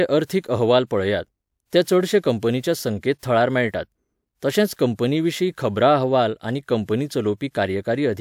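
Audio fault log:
No technical faults can be heard anywhere in the speech recording, with the signal holding steady and continuous throughout.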